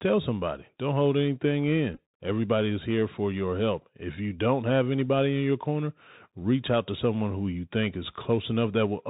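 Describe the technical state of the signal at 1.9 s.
Just after "hold anything", from 1.94 to 1.98 s, a Bluetooth headset packet repeat occurs. About 30 ms of audio is lost, scattered over 37.5 ms, which fits about eight lost packets. The chip re-decodes the previous packet's bits, and through the longest run of roughly 15 ms the 3.75 ms repetition produces a buzz near 267 Hz.

Underneath, the Bluetooth CVSD headset codec is plainly audible, consistent with a 64 kbps link. Its one-bit up/down coding with an adaptive step removes everything above 4 kHz, makes s sounds scratchy, distorts loud high-frequency content that outruns the step, and leaves a granular hiss beneath the speech.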